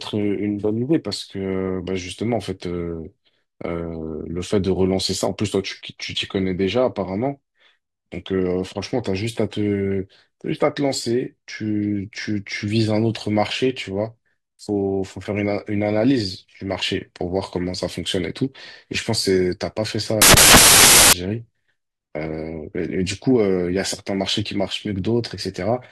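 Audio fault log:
20.22–21.13 s, samples built from the wrong bytes: for about 0.9 s the speech becomes loud, harsh broadband noise, as wrongly assembled bytes turn each sample's fast-changing low bits into its largest part.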